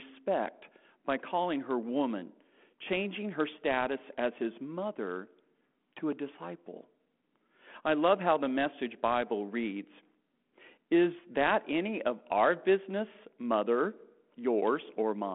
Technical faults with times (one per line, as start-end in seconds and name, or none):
none